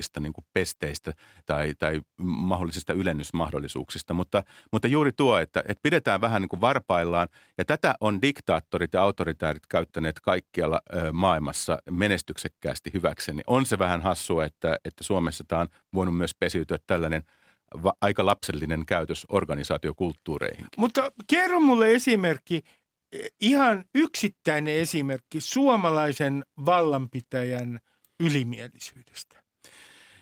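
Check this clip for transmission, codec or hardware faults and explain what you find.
Nothing stood out on listening to this speech recording.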